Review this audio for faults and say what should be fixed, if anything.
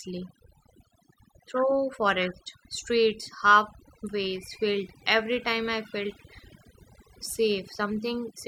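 Throughout the speech, the background drops to near silence with twinkling specks. This is overdone noise removal: bands near the noise estimate are cut so hard that quiet voice detail vanishes too. To prevent it, set the noise reduction gentler and accept some residual hiss rather than pushing bands to silence.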